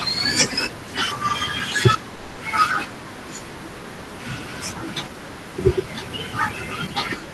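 Long network dropout from 2.15 to 2.39 s: for about 0.22 s the speech gives way to a buzzy, smeared continuation of the preceding sound that fades without reaching silence. Packets likely stopped arriving and the receiver concealed the gap. The speech then resumes with that stretch missing.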